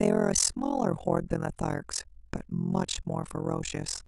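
Speech throughout carries overlap-add ripple: the level dips and recovers about 60 dB on every frame, at around 40 Hz, giving a fast, rough flutter. The windowed frames were recombined with an overlap whose gains do not sum to a constant.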